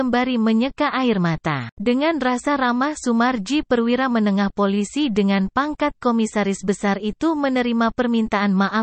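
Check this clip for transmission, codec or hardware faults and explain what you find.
One fault stands out, a single repeated buffer. At 2.45 s there is a tiny click, almost a brief buzz, where a 1.33 ms piece of sound plays twice with a hard join. New audio arrived late, so the device replayed its last buffer, which fits a 64-sample buffer. No audio seems to be lost.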